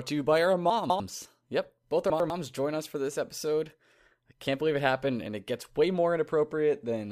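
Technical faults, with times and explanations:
0.7–1.0 s, chunks out of order, right after "to you by our": a 100 ms chunk plays two chunks late. The speech briefly jumps ahead then back across three hard joins, though nothing is missing.
2.1–2.3 s, chunks out of order, just before "join us for this": a 100 ms chunk arrives one chunk late, swapping two neighbouring pieces. The result is a short jumbled stutter where the mismatched edges meet.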